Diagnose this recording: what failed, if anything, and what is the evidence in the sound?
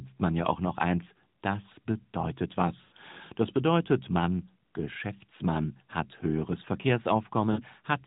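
Network stage: lost AMR speech frames. After "noch eins das bedeutet", 2.82 to 2.92 s, the speech smears into a fading buzz for about 100 ms, then again for 60 ms at 7.52 to 7.61 s. The decoder repeated its last good pitch and vocal-tract settings at falling gain, which fits five and three dropped 20 ms frames.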